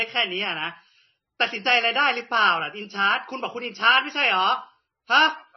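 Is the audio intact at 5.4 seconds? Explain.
No. At 5.4 s, as across the whole clip, the speech shows heavy MP3 compression damage: nothing above 5.9 kHz, with a watery, swirling texture where weak frequency lines drop in and out between frames. This likely comes from a bitrate as low as about 24 kbps.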